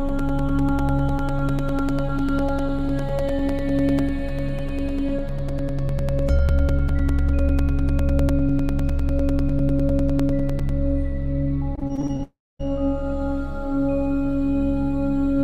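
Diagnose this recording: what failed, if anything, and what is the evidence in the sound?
Two stages failed here: the driver or buffer on the capture side, then the network near the end.

From 0.09 s to 10.7 s there are periodic USB or driver dropouts. Every 0.1 s, so ten a second, a few milliseconds of audio get replaced by silence. You hear it as an even, clockwork ticking riding on the signal, around a hundred clicks in all. That regular spacing points to something blocking the USB bus or the audio driver on a fixed schedule, so the buffer runs dry briefly each cycle.

Between 11.75 s and 12.22 s it turns choppy and a bit robotic. That's repeated packet loss. There are seven holes, none longer than about 21 ms, and each one gets patched by stretching the previous sound. Over that half-second roughly 28 percent of the signal is concealment rather than real audio, which is what gives it that chopped-up texture.

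Right after that, from 12.23 s to 12.61 s, the audio drops out. It starts with a smeared continuation of the last sound that fades away, then about 0.24 s of silence before the signal comes back with that stretch gone. That's most likely a long network dropout: nothing arrived for nearly 0.4 s, and the receiver filled what it could before giving up.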